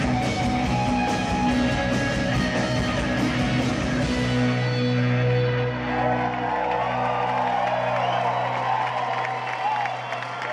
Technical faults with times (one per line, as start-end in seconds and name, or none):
none